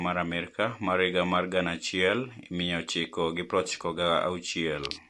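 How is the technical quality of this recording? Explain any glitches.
The quality is noticeably degraded by likely MP3 compression across the whole speech clip. The encoder discards quiet frequency lines, so the sound turns watery and swirly, with smeared consonant attacks. A spectrogram shows a hard ceiling at 11.3 kHz and flickering gaps below it, pointing to a low bitrate of roughly 50 kbps.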